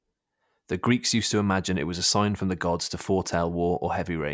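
No dropouts, distortion, noise bursts or timing errors can be heard anywhere in the recording, so there is nothing to report.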